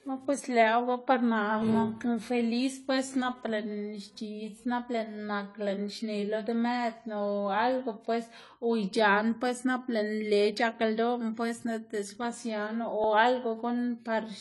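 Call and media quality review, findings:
Dull, smeared speech with swirly, fizzy sibilants, whole clip. Likely AAC compression (AAC-LC) at a low bitrate, around 32 kbps. Coarse spectral quantisation; spectrogram shows a hard ceiling, nothing above 11.5 kHz, and patchy upper bands.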